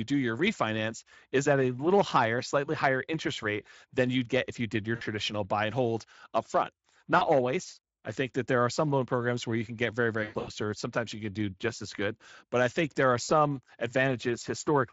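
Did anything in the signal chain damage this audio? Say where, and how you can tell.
Yes, it's the network stage: VoIP packet loss concealed by the speech codec. After "if you did your" at 4.95 to 5.03 s, after "and hold up front" at 7.17 to 7.26 s, and at 13.23 to 13.32 s, the sound smears into a buzzy tone or coloured noise that fades. The worst is after "you can get very", from 10.23 to 10.50 s, where dropouts stutter, one about 120 ms long. The decoder is guessing from its last pitch and filter, so the voice stays thin briefly after packets return. The Speex layer's light coding damage is background.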